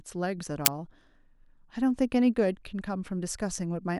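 At 0.66 s the speech is interrupted by an uninitialised buffer: for about 12 ms a block was sent to the output before any audio had been written into it, so whatever values remained in that memory were played as samples. The result is a brief, loud crack that does not belong to the signal around it. Its length fits a 512-sample buffer.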